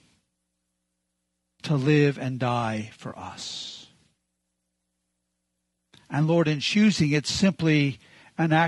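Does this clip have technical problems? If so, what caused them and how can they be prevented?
Yes. Throughout, the speech sounds rough and grainy, with noise between harmonics and a thin top band, likely from low-delay AAC compression (AAC-ELD) at a bitrate near 32 kbps. Raising the bitrate or choosing a codec mode with longer frames would prevent it.

From 3.09 to 3.13 s, just after "to live and die", a brief smeared patch marks AAC frame loss with concealment: about 20 ms of audio, roughly one frame, was rebuilt from the preceding spectrum. A more reliable network path or forward error correction would prevent it.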